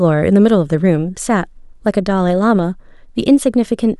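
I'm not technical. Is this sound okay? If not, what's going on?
Yes, nothing in this recording points to a technical problem with how the sound was captured or played back.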